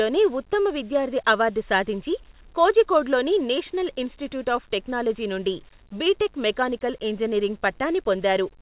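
No technical faults are audible.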